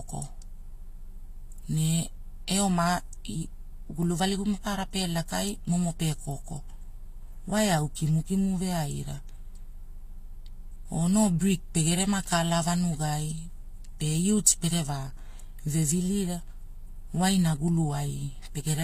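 From start to finish the speech stops dead at 14.9 kHz and carries two different textures of coding artefact at once, a synthetic, swirly top alongside a separate smeared blur. That layering, not one codec's single consistent signature, points to transcoding between lossy codecs, likely a Vorbis encode near 48 kbit/s re-encoded as HE-AAC near 24 kbit/s.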